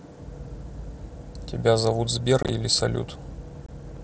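At 2.43 s and 3.66 s, unconcealed Bluetooth headset packet loss punches abrupt silent holes into the speech (37.5 ms scattered over 60 ms, then 22.5 ms), with nothing patching over the gaps as concealment would.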